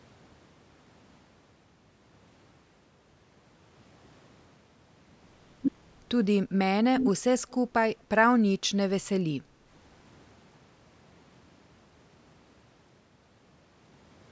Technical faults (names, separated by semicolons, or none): echo leak